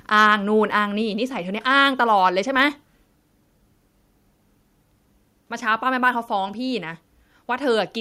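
From 0.17 to 0.33 s the loudest speech peaks take on a harsh, crackly edge. This is microphone overload, likely from an input level pushed about 3 dB past what the converter can represent. On a waveform the affected peaks appear as flattened plateaus, though only a small share of samples is cut. A spectrogram shows broadband smearing above the harmonics during those peaks.

At 1.02 s the whole signal, speech and background alike, drops by about 2 dB in a single step. This is a microphone volume step-down, likely the call software lowering the device's input gain after the earlier overload. On a waveform the envelope shows a clean downward step, and a spectrogram shows every band dimming at the same instant.

From 2.58 to 2.63 s microphone overload returns briefly, about 1 dB over the limit and with roughly one percent of samples clipped. It sounds like a short gritty crackle on a loud syllable. 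The clipped tops appear as a few flat-topped peaks, with a splash of high-frequency energy on the spectrogram.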